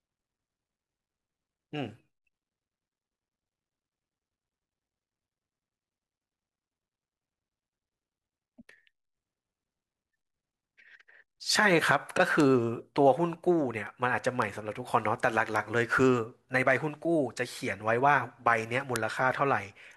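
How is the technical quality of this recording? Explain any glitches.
The speech recording has four bit error spikes, at 12.40, 14.42, 15.56 and 18.96 s. Flipped bits in one to three samples make each value jump and snap back, giving sharp broadband ticks peaking at about -13, -19, -13 and -1 dBFS.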